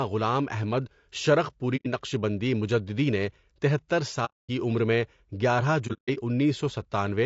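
Speech, and the whole clip carries low-delay AAC compression damage that is plainly audible: the voice sounds rough and grainy, with noise filling the gaps between pitch harmonics and a thin, synthetic-sounding top band. This is likely AAC-ELD, the short-frame codec used in video calls. Its brief transform frames resolve harmonics coarsely, and the damage fits a bitrate near 32 kbps. Three AAC frame loss with muting events cut holes in the audio. The decoder zeroes the missing frames, and the overlapping windows fade the sound out and back in, so each gap is soft-edged. The first runs from 1.76 to 1.87 s, just before "نقشبندی مجددی نےتہتر", and removes about 90 ms, which fits three lost frames. The second, from 4.25 to 4.50 s, follows that same phrase and removes about 240 ms. The third spans 5.87 to 6.18 s as scattered dropouts totalling about 210 ms across 300 ms, the longest roughly 150 ms.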